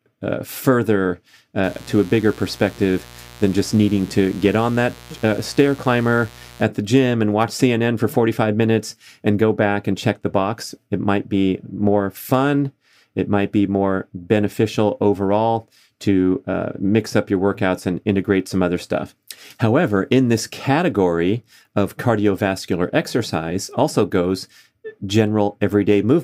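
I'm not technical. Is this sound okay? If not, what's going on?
No. Mains buzz from 1.63 to 6.63 s, just after "uh further", until "the gym and watch": electrical interference from the 60 Hz power supply leaks in as a steady, raspy buzz.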